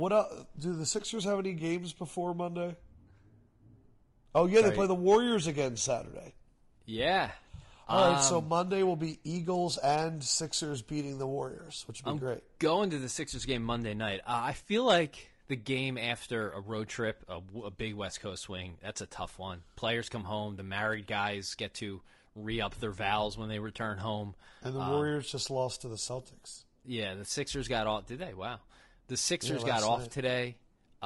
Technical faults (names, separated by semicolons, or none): low-delay AAC compression